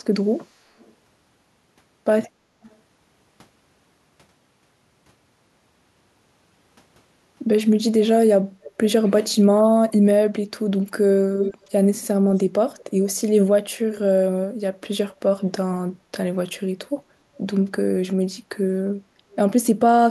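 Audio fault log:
0.79–0.93 s, 2.69–2.76 s, 8.62–8.72 s, 11.35–11.65 s, 12.78–12.84 s: echo leak. Brief scraps of the speech return about 250 ms late, faint at first and nearly as loud as the speech by 11.35 s. The likely cause is a far-end loudspeaker's echo canceller letting residue through. A fixed, distinct delay sets it apart from smeared room reverb.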